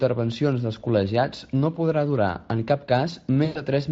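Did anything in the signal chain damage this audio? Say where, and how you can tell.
Yes, at the network stage: just after "en cap", from 3.45 to 3.62 s, you get VoIP packet loss concealed by the speech codec. About 100 ms went missing, roughly five 20 ms frames, and the Speex decoder filled the hole by extrapolating from its last pitch and filter into a buzzy tone or a coloured noise that fades. It stays weak or distorted briefly after packets return.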